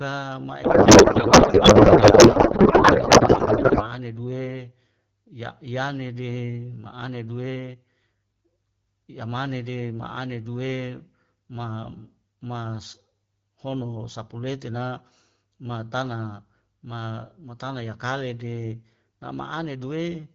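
Codec payload misread runs from 0.63 to 3.91 s, ending just before "ane due". For those three seconds the speech turns to garbled noise and warble that barely tracks the talker, a sign the AMR wideband decoder is parsing its frames with the bit fields misplaced. The sound points to octet-aligned packing being read as bandwidth-efficient. Once both ends agree on the format, clear AMR-WB speech returns, consistent with a rate around 12.65 kbit/s.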